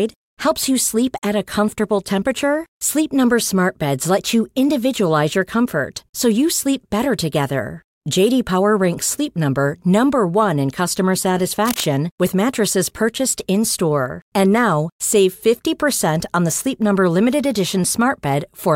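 A worn cable or connector, likely shifted during recording, briefly varied its contact resistance, so this speech recording carries cable scratch noise from 11.65 to 11.84 s: a dense, ragged rustle roughly 10 dB below the speech, lasting about a fifth of a second.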